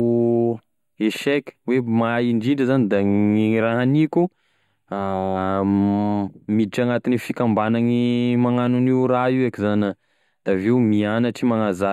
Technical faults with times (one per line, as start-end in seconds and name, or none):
0.00-11.92 channel delay (comb filtering)